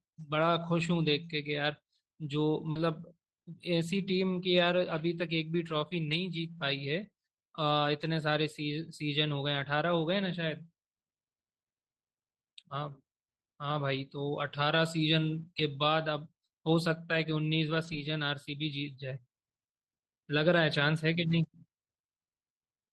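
At 2.71 to 2.77 s, short concealed packet loss leaves a brief smeared wobble: about 40 ms never arrived and was filled by extending the preceding sound, not by a silent gap. Within it, at 2.75 to 2.77 s, and again from 17.83 to 17.97 s, lost packets rebuilt from error correction sound rougher and grainier rather than smeared. The second stretch rebuilds about 80 ms, which fits four 20 ms packets decoded from low-bitrate copies carried in the packets that followed. The Opus call path's coding noise and its roughly 12 kHz upper limit are present throughout.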